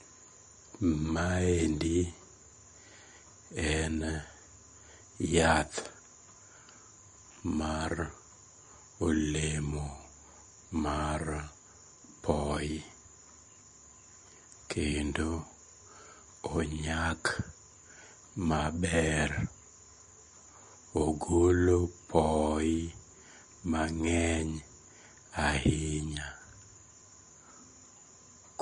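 All the way through, the speech has a watery, swirly edge and nothing above about 10.6 kHz, likely MP3 compression squeezed to something like 40 kbps.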